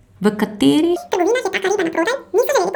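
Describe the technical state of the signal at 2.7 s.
At 2.7 s the speech is affected by audio read two samples at a time (double speed), from 0.96 s to the end. Each pair of samples is taken as one frame, so playback runs at twice the speed and an octave higher.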